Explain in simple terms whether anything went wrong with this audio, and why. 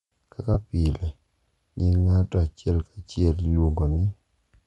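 Yes, a couple of things. The whole recording has a breathy, grainy edge on the speech, likely from Bluetooth LC3 compression squeezing the sound to fit a wireless link.

Then at about 0.54 to 0.58 s there's a brief noisy smear. That's lost LE Audio frames: roughly 20 ms of sound went missing, and the decoder patched the gap with scrambled leftovers.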